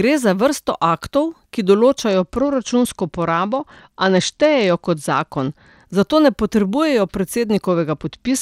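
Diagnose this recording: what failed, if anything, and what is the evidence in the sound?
The failure is at the codec stage on the Bluetooth link, a Bluetooth SBC bit pool drop that happens twice. From 2.09 s, right after "za vrsto aktov ki", to 5.88 s, just before "zato ne", the speech loses its treble and picks up a gritty noise. The same thing returns from 7.67 s to the end. That fits the phone cutting the bit pool from 28 to 10, around 84 kbps, so the top sub-bands starve and the rest get coarsely quantised.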